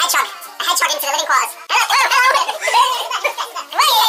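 From the first moment to the end, the audio has been read two samples at a time, so it runs at double speed and sits a full octave (12 semitones) high. The reader treated each pair of samples as one frame, as if the stream held two channels or wider samples. Unlike a plain sample-rate mismatch, which only speeds up and raises the pitch cleanly, discarding alternate samples folds any strong content above a quarter of the sample rate back down.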